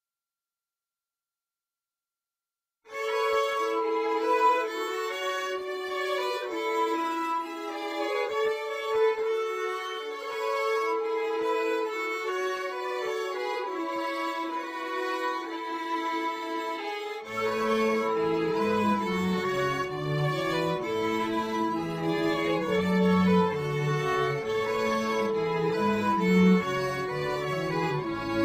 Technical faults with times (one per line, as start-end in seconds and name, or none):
none